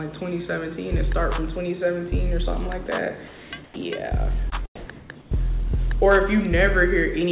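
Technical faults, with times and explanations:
2.86–2.88 s, 3.64–3.76 s and 4.76–4.90 s, sound dropped by the voice detector: the sender's voice detector likely mistook faint passages for background and stopped transmitting, so the receiver substituted synthetic comfort noise for 20, 120 and 140 ms. Real sound vanishes, roughly 10, 60 and 80 ms of it, and is briefly replaced by flat hiss before transmission resumes, so the sound seems clipped or gated.
3.28–3.52 s, 5.00–5.10 s and 5.21–5.31 s, comfort noise in place of the background: during pauses the sender likely switched to discontinuous transmission, and the receiver generated noise shaped to the background for 240, 100 and 100 ms. The textured background, which sits about 21 to 25 dB below the loud parts, becomes a smooth, featureless hiss about 3 to 4 dB quieter. Within the narrow call band, with nothing above 4 kHz, it is a dull, even wash.
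4.50–4.54 s, short concealed packet loss: about 20 ms of audio arrived too late to decode, and the receiver filled roughly 15 ms by extending the preceding sound before blending back into the real signal. The result is a brief smear or wobble, where the continuation can't quite match what was lost.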